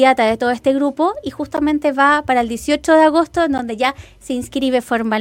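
At 1.57 s and 3.58 s, a gap between chunks leaves a hard-edged 12 ms hole every 2.0 s; unlike a dropout, no sound is lost, only delayed.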